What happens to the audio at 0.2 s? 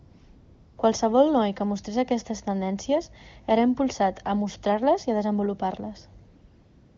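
AMR comfort noise runs from 0.00 to 0.77 s. The phone treated this opening stretch as silence and sent no speech frames, so the receiver generated a synthetic noise from a rough description of the background's level and spectrum, heard as a steady, smooth hiss.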